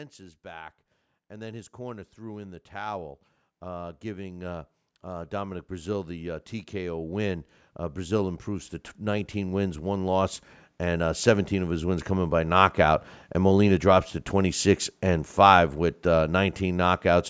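From 0.17 s to 12.5 s the speech shows automatic gain rising: the gain control judged the input too quiet and kept lifting it, by about 23 dB in total. Voice and background noise swell together. On a waveform the envelope widens steadily, and a spectrogram brightens evenly across its range, which stops at 8 kHz under the call microphone processing.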